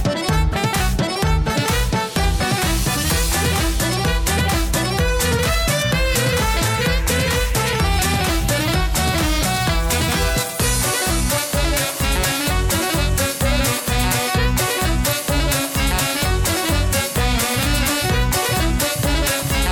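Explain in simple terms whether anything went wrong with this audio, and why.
Around 11.36 to 11.40 seconds, a corrupt frame was decoded. A couple of the small compressed chunks the audio is stored in got damaged, with some of their data scrambled, but the player decoded them anyway instead of skipping or patching them. The scrambled data put sound at the wrong pitches, so for about 40 milliseconds you hear a brief chirp or blip of noise that isn't part of the original sound, and it is fairly loud.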